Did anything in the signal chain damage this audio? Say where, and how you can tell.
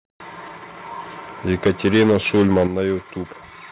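Yes. The damage is at the converter, and the likely cause is microphone overload. From 1.49 to 2.64 s the loudest speech peaks run about 10 dB past full scale. Their tops are sheared flat. You hear a harsh, crackly edge on each strong syllable. Flat-topped peaks recur across that whole stretch, roughly 7 percent of samples. The cut-off above 4 kHz comes from the call codec and is not part of this damage.

The second fault sits in call processing. The microphone volume was likely stepped down by automatic gain control reacting to the distortion. At 1.67 s the level drops about 2 dB in one step. At 2.67 s it drops again, by about 7 dB. Speech and background fall together, instantly. No fade, no ramp. That sudden joint drop, right after clipped peaks, marks a software change to the device input gain.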